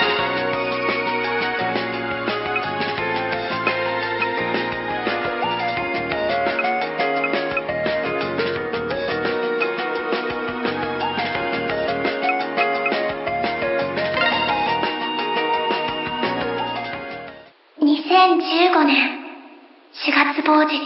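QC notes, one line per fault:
No technical faults are audible anywhere in the audio.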